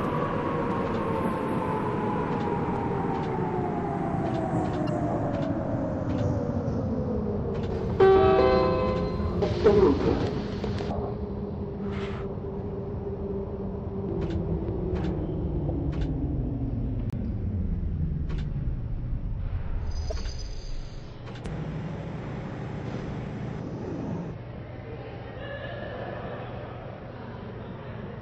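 The audio carries a constant watery, swirling texture with dulled treble and smeared attacks, most likely from MP3 compression at a low bitrate, something around 64 kbps. Short of bits, the encoder has cut off the top of the spectrum and dropped weak frequency components, which then flicker in and out from frame to frame. Unlike the isolated faults below, this damage never lets up and colours every moment of the clip.

Three brief disturbances mark the corrupt frame decoded fault, at 4.87–4.89 s, 15.68–15.70 s and 20.10–20.14 s. In each, a compressed frame with flipped bits was played rather than rejected, so misread gains and codes threw energy onto the wrong frequencies for roughly one or two frame lengths. The first is the loudest, at about −15 dBFS. The one near 15.7 s is fainter, around −25 dBFS. These faults add foreign sound, which sets them apart from a muted frame.

At 17.10–17.14 s a corrupt frame muted fault cuts a 40 ms hole. 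The decoder discarded a single damaged frame and the player put silence in its place, so the sound drops out abruptly for exactly one frame length. The timing carries on unchanged afterwards. That gap of silence is what tells it apart from the decoded corruptions, which put a burst of wrong sound where this one leaves nothing.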